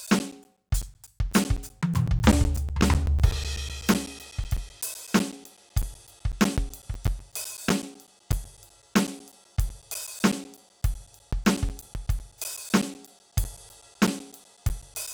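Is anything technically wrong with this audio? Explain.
Yes. Periodic USB or driver dropouts run from 0.07 s to 15.08 s. Every 0.125 s, something blocks the USB bus or the audio driver, and about 10 ms of the music is lost to silence. That makes around a hundred evenly spaced ticks, eight per second, that sound only while the music plays.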